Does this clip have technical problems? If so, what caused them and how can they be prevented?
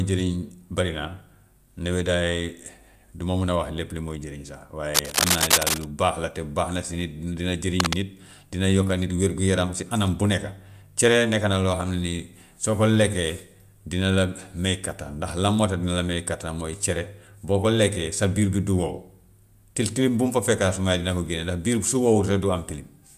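Yes. Cable scratch noise, rough bursts about as loud as the speech, occurs from 4.91 to 5.84 s and 7.80 to 7.95 s, likely from a worn, moved connector; spectrograms show broadband speckled smears. Reseat or replace the cable and secure it against movement.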